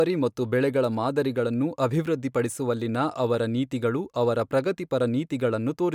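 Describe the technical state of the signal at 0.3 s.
At 0.3 s the speech signal is intact, with no audible fault at that moment.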